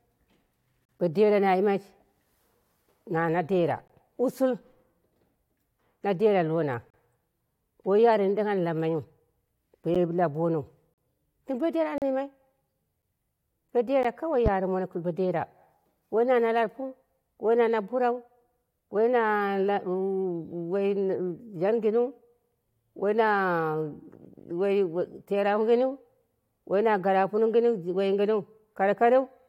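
Gaps between stream segments at 0.85, 3.88 (just after "na na dera"), 6.90, 9.95, 10.94, 11.98, 13.02 and 14.03 s. The first, before "bo dera na yimai", is about 37 ms long. Mismatched timestamps on roughly one-second segments leave silent holes of about 8 to 41 ms with hard edges.

A loud pop at 14.46 to 14.49 s, just before "gɨn bodera", is a single sharp thump about 15 dB above the speech. It likely comes from a sudden voltage pulse such as a switch or driver glitch.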